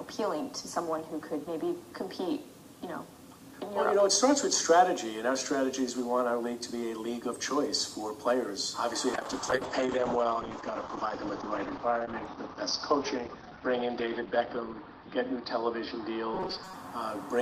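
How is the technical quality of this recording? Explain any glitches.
Two glitches mar the second half. From 9.15 s to 16.93 s, a call bitrate drop turns the sound muffled and rough: the encoder fell from 64 to 8 kbps, dropping the bandwidth from 20 kHz to 6 kHz for about 5.5 s. From 16.34 s to 16.77 s, a rigid 188 Hz metallic buzz is likely robotic sound from repeated short buffers, with roughly half the audio replaced by repeats, which fits a buffer of about 5.3 ms.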